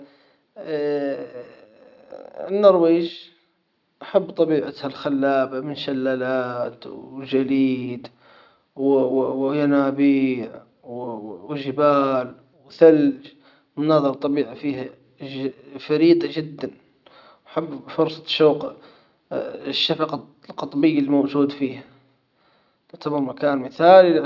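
No technical faults are audible anywhere in this speech recording.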